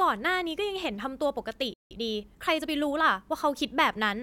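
At 1.74 s the speech cuts to silence in a playback stall. The gap lasts about 0.17 s, to 1.91 s. The player likely ran dry of data or was blocked. The speech then resumes mid-flow.

From 1.91 to 3.01 s comes a time-compressed catch-up. The player trims its backlog by dropping short slices and cross-fading the joins. The speech runs about 1.15 times fast at unchanged pitch.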